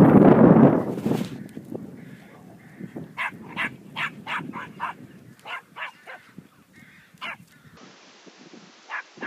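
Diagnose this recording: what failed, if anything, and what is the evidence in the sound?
At 7.77 s the sound abruptly loses its top end: nothing above 7.6 kHz through to the end, with no gap at the transition and no obvious level jump. A new background noise appears, roughly 30 dB below the signal. This is likely an input switched to a poorer device at the driver or device-routing stage.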